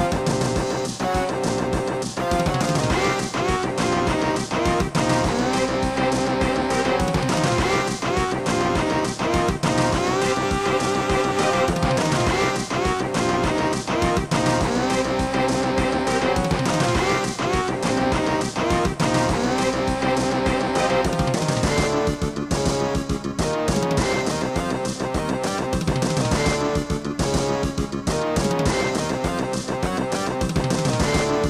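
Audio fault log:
Nothing jumps out here at all, so there's no fault to log for this one.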